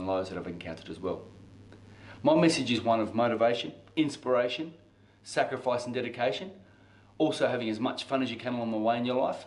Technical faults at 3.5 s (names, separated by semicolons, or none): none